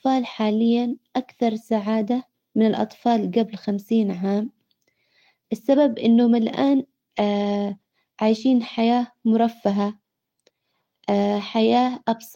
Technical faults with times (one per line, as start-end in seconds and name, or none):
none